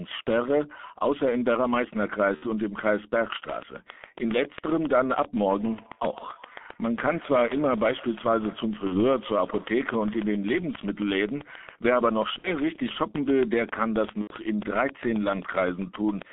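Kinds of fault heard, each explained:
G.723.1 codec: muffled, hoarse speech with smeared consonants, typical of a low-rate codec near 6 kbit/s; the spectrogram shows energy only between 0.2 and 3.5 kHz.
VoIP packet loss concealed by the speech codec: gaps of 30 to 90 ms filled with a fading buzzy tone or coloured noise, visible as smeared, fading bands near 2.4, 8.9, 12.4 and 14.2 s.
Feedback echo between two devices: from 5.58 to 10.81 s, speech returns roughly every 150 ms, about 21 dB down, showing as faint, thinning repeated copies trailing each waveform burst.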